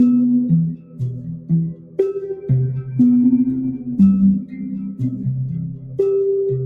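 A noise suppressor designed for speech is running over this music throughout. It treats sustained tones, ambience and reverb tails as noise and pulls them down, while attacks largely pass. The gain it applies swings by something like 15 dB, so held material pumps and thins, and the level lurches as the processor opens on transients and clamps again once the sound settles.

The first cases of sound cut by the noise suppressor fall at 0.72 to 1.52 s, with a drop of up to about 13 dB, and at 1.69 to 1.99 s, about 14 dB. Later cuts occur at 4.44 to 4.65 s (about 12 dB), 4.89 to 5.26 s (about 11 dB) and 5.53 to 5.99 s (about 11 dB). In each, sustained or decaying sound sinks in level or has its tail cut short.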